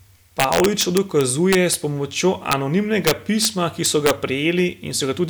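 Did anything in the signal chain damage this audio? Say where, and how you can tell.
Yes. A gain or summing stage without saturation, most plausibly at sample-format conversion, let peaks exceed the integer ceiling, and they wrapped to the opposite sign instead of clipping. That is integer overflow, with violent cracks on loud speech from 0.40 to 1.74 s, just before "s pomočjo", at 2.52 s right after it, from 3.07 to 3.45 s, and from 3.86 to 4.11 s. Peaks were driven about 2 to 4 dB past full scale, so each one jumps across the whole range, far harsher than clipping.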